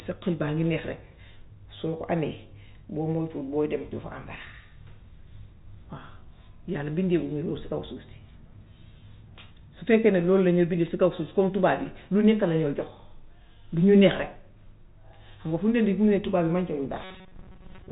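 Speech heard through G.711 telephone coding, with nothing above 3.8 kHz. From 17.04 s to the end, right after "tubaab yi mànkewuñ", the sound turns into a rigid, metallic 188 Hz buzz, robotic sound likely caused by repeated short buffers of about 5.3 ms covering most of the real audio.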